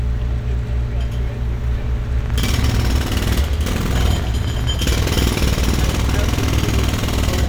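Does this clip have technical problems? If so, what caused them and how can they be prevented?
Yes. A train of clicks runs from 2.21 to 7.26 s, about 12.3 per second, unevenly spaced, poking a little above the sound. Likely cause: electrical interference or a struggling interface. Shield cables and keep the interface well-powered and away from other equipment.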